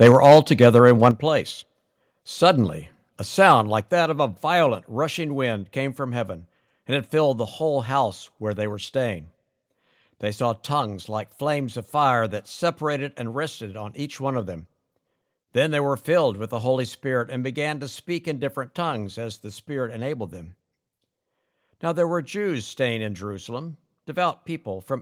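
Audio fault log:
0.02–1.08 s, microphone overload: the loudest peaks are flattened and carry a harsh crackle, likely from input level sitting about 6 dB past the converter's ceiling, clipping a few percent of samples. Unlike a volume step, the damage is distortion within the waveform, not a change of level.
0.12 s, 1.11 s and 3.81 s, microphone volume stepped down: sound and background drop together in sudden clean steps of about 3, 7 and 5 dB, the last between "a sound" and "that of a violent", likely the call software cutting input gain after loud peaks. There is no added distortion, only an abrupt fall in level.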